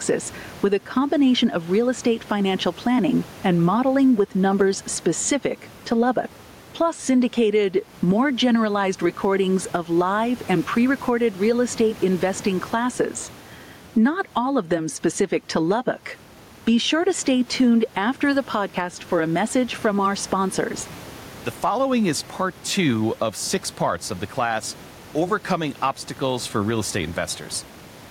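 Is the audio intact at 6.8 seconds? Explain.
No. Gain pumping runs through the whole speech clip, including 6.8 seconds. The level swings by around 10 dB. The likely cause is gain set far too high, with a fast limiter or compressor pulling it back on every peak. The room noise sits about 30 dB below the speech, and the speech sounds squashed.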